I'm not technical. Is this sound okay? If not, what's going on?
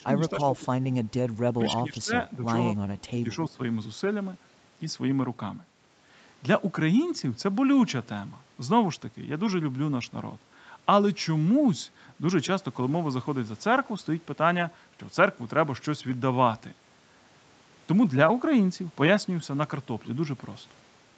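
No, not quite. In the first few seconds the voice keeps ducking down or partly dropping out, at 0.0 to 0.33, 0.5 to 0.87, 1.58 to 2.12, 2.29 to 2.38, 3.11 to 3.29 and 3.49 to 3.59 seconds. The dips are brief, a fraction of a second each, and the early ones are the deepest. This is speech suppressed in double talk. Most likely both people were talking at once, and the call's echo control couldn't tell this voice from echo, so it turned it down.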